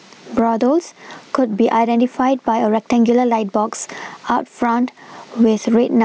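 From start to finish, the level is pulled down each time the talker gets loud, with the level swinging by something like 15 dB. The result is gain pumping: loud and quiet passages sit unnaturally close together and the speech sounds squashed. The likely cause is input gain set far too high for the microphone, with a fast limiter or compressor clamping down on each loud sound. The call's microphone processing, which keeps everything below 8 kHz, is not part of that fault.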